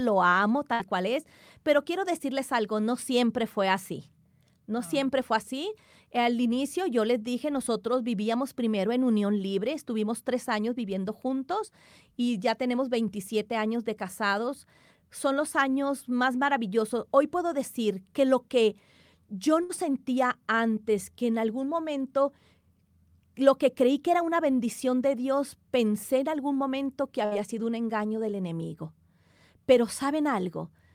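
A speech clip with three short bursts of packet loss, at 0.73, 19.63 and 27.25 s, each lasting roughly 90 ms. In each one, about 60 ms of audio just goes missing, and the receiver papers over it by stretching out the last sound and fading it, so you hear a brief held buzz or hiss before the talk picks up again at "cual es pero quiero", "sentía antes que en" and, after "en algún momento que", "sido un engaño del".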